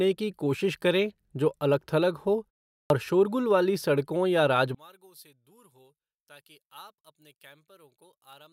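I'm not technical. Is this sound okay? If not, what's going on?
No, there are two faults.

The first is a clipped start after a pause at 2.81 s. After "जो अलग थलग हो" there is a short silence of about 0.4 s. The playback device dozes off during that gap and needs a moment to come back, so the first 0.09 s of the next sound is lost. The speech resumes abruptly, with its opening sound cut off, at the start of "शोरगुल वाली सड़कों या".

The second is one channel inverted, from 4.75 s to the end. Right after "शोरगुल वाली सड़कों या", the voice suddenly becomes much quieter and nearly disappears. This is likely because one of the two stereo channels is flipped upside down. When the left and right channels are combined into one, the parts they share, voice and background alike, cancel each other out and leave only a faint remainder.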